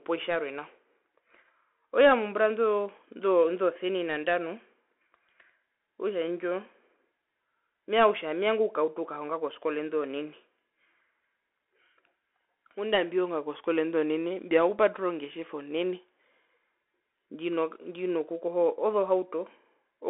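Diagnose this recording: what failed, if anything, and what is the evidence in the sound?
Bluetooth CVSD headset codec, throughout the speech: this is a codec-stage fault. Nothing comes through above 3.8 kHz, and the speech sits in a 300 to 3400 Hz telephone band. Codec damage is plainly audible: s sounds turn scratchy, and a granular hiss runs underneath. CVSD sends one up-or-down bit per sample, which fits a 64 kbps link, and its adaptive step can't keep up with loud high-frequency sound, so those moments distort.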